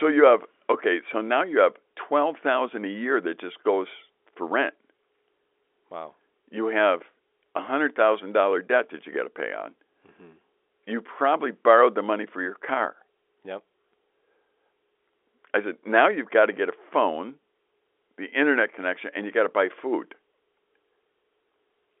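No faults are audible: the speech sits in a 300 Hz to 3.5 kHz telephone band with nothing above 3.8 kHz, consistent with G.711 telephone coding working as intended.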